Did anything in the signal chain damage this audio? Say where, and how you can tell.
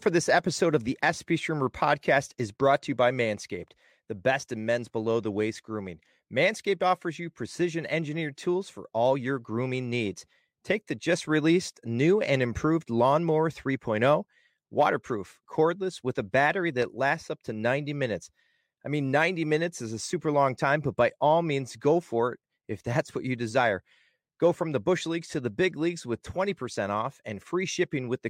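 Yes. A single loud pop sits at 16.82–16.84 s, just after "cordless with a battery" and before "lasts up to", peaking around 10 dB above the speech. The speech carries on unbroken beneath it, so nothing was lost. That rules out a dropout, which would leave a gap. The cause is likely a voltage step in the analogue wiring, such as a connector or static discharge, which the following circuits shaped into one brief thump.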